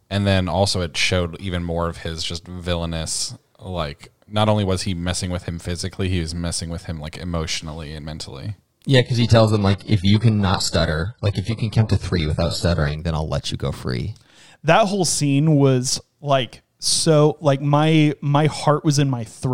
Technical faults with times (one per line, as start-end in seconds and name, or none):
8.96-12.96 adaptive stream at a lower bitrate